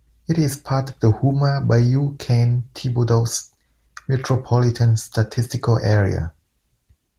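No faults found in the speech; the Opus voice compression leaves only light coding traces, which fits a hybrid, fullband mode at around 20 kbps.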